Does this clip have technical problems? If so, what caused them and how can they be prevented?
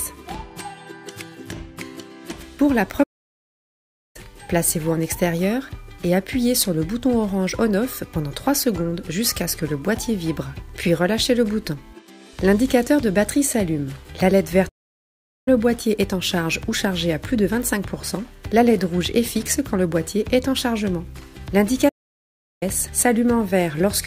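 Yes. The player likely ran short of data or had its thread blocked, causing a playback stall at 3.03 s, 14.68 s and 21.88 s. Each time, the sound drops to silence for 1.11 s, 0.78 s and 0.73 s, then resumes. A larger playback buffer and a higher-priority audio thread would prevent it.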